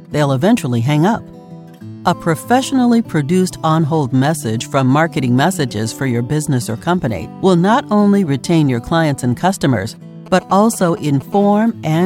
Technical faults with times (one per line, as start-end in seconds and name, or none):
10.26-11.22 GSM signalling bursts
11.32-12.01 GSM phone buzz